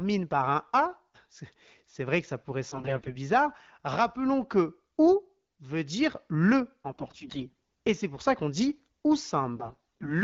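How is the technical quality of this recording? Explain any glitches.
Three short bursts of AMR bit errors, at 2.69 to 3.16 s, 6.92 to 7.54 s and 9.56 to 10.09 s, mar speech carried over the AMR wideband (HD Voice) codec, whose light band-limited coloration suggests a 12.65 kbit/s mode. In each burst, a weak link flipped many of the less protected frame bits, heavier in the second and third bursts, while the integrity check on the core bits still passed. The decoder therefore misplaced excitation pulses and misread fine pitch, gain and spectral detail. The voice turns hoarse and gargly. Unlike packet loss, there is no gap or muting, and pitch and loudness roughly carry through.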